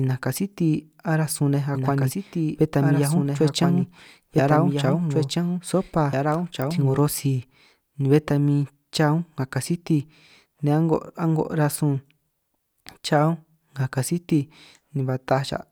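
A doubled audio track runs from 1.75 to 6.99 s. A second, full-band copy of the speech trails the original by about two seconds at about 5 dB lower, with no decay or room colour. It starts and stops abruptly, likely from a slower capture path mixed back in.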